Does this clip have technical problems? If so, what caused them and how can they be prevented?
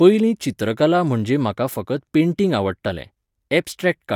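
No, this clip has no technical problems, so there is nothing to trace back to a cause or to prevent.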